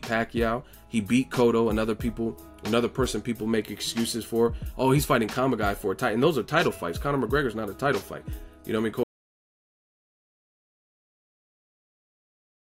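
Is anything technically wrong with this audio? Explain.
Yes. At 9.03 s the audio drops out to silence and stays silent through to the end at 12.78 s. The sound stops abruptly mid-flow, and what follows is silence with no room tone left. The likely cause is a lost input, such as a disconnected device, a failed link or an accidental mute, while recording carried on writing silence. On a waveform the trace collapses to a flat line, and a spectrogram shows uniform black from that point on.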